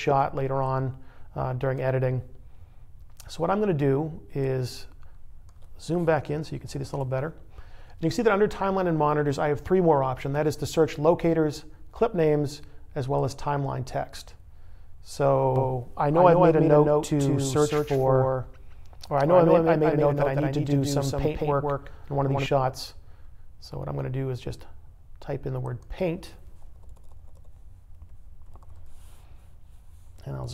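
From 15.56 s to 22.46 s you get a doubled audio track: a second full-band copy of the sound trailing the original by around 150 ms, roughly 5 dB quieter. There's no decay or room colour on it, so it reads as a flat echo, and it cuts in and out abruptly at those two points. The likely cause is either the signal being captured again through a slower path or an edit holding two out-of-step copies.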